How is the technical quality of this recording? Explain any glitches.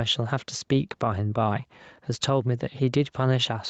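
The recording has one persistent fault: gain pumping throughout. The clip is speech. It sounds band-limited, with nothing above 8 kHz, consistent with a call path.

The gain pumping runs for the whole clip. The level breathes audibly, with a swing of roughly 5 dB. The likely cause is microphone gain set far too high, with a fast limiter or compressor clamping each peak and releasing between them. The result is squashed dynamics, with loud and soft passages pressed close together.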